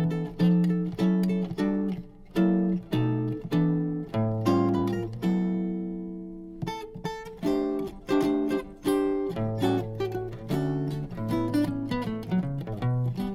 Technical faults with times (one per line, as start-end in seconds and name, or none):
none